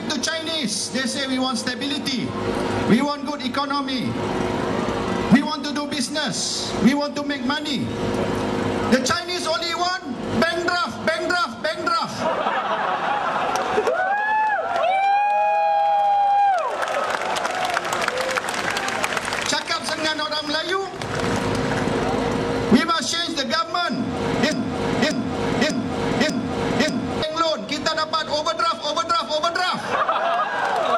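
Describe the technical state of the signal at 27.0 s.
A broken-record loop runs from 24.52 to 27.22 s: a 0.59 s fragment repeats five times back to back, likely from a stalled player resending its last buffer.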